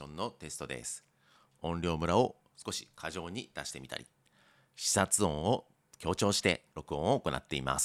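Nothing stood out on listening; no technical problems were heard anywhere in the clip.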